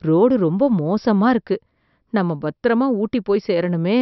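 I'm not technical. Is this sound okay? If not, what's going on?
Yes, this sound is okay, and there's nothing going on that needs fixing.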